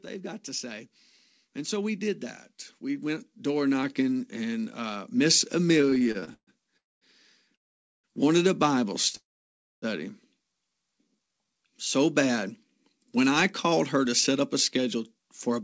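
Automatic gain rising happens three times at the start. The gain control judged the input too quiet and raised its level step by step: by about 4 dB from 0.05 to 0.98 s, about 4 dB again from 1.53 to 2.31 s, and about 7 dB from 2.82 to 5.18 s. The speech and the background swell together over each span, so the level creeps upward rather than jumping.

Repeated stalls (stutter) follow from 5.78 to 6.50 s. Packets kept arriving late, so the jitter buffer ran dry 13 times in under a second. Each time, the receiver extended the last sound to bridge the wait. The longest hold is 136 ms, and about 0.3 s is filled in all, roughly 42% of that stretch. Nothing is lost, but the speech drags and stutters as it keeps stopping and restarting.

Three call audio freezes come next. In each one the sound stops, fades out, and then resumes from exactly where it left off, so a gap is inserted and nothing is skipped. 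The first runs from 6.77 to 7.04 s and is about 0.24 s long, nearly all of it silent. The second runs from 7.55 to 8.07 s and lasts about 0.48 s. The third, from 9.17 to 9.85 s, is the longest at about 0.65 s, with around 0.6 s of silence. The likely cause is packets held up in transit that emptied the jitter buffer. Each freeze also pushes the rest of the audio later by its own length.

A jitter buffer slow-down follows from 11.04 to 11.71 s. With its reserve running low, the receiver repeated single pitch periods and slivers of pause to rebuild it, adding about 104 ms. That stretch plays at 86% speed while the pitch stays the same, so the speech sounds drawn out.

A jitter buffer speed-up runs from 12.94 s to the end, around 15.61 s. Now the buffer held more audio than its target, so the receiver trimmed short pitch-period pieces over and over, removing about 150 ms in total. The speech plays at 105% speed at the same pitch and sounds a little hurried. 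All of this is heard through the call's G.722 path, which leaves nothing above 8 kHz.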